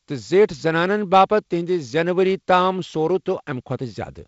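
No technical faults detected.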